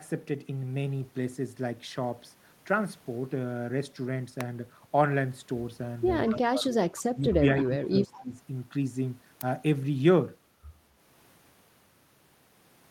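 Electrical switching spike at 4.41 s and again at 9.41 s: each is a sharp snap or tight cluster of clicks laid over the speech, lasting only a few milliseconds. It is likely a nearby switch or static discharge arcing briefly and being picked up on the audio line.

Speech suppressed in double talk from 6.27 to 6.82 s, 7.14 to 7.22 s and 7.64 to 8.35 s: the talker dips by up to about 25 dB. The likely cause is an echo canceller that couldn't separate its own talker from loudspeaker echo while both sides spoke, so it turned everything down.

Echo leak from 7.2 to 7.35 s, 7.6 to 7.64 s and 8.17 to 8.23 s: faint scraps of the voice return 214 ms late, roughly 20 to 30 dB below the speech. This is likely residual loudspeaker pickup that the far-end canceller failed to remove.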